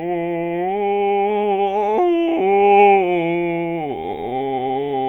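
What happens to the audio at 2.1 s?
Nothing goes wrong at 2.1 s; the music plays through that moment intact, with no dropout, click, glitch or other fault.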